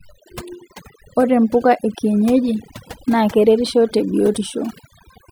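A noise reduction stage set far too aggressively runs through the whole of this speech recording, a clear case of overdone noise removal. Wherever a frequency band sits close to the tool's noise estimate, it is pulled down hard or shut off, and the softer parts of the voice fall below that line too. The background drops and breaks up into twinkling specks.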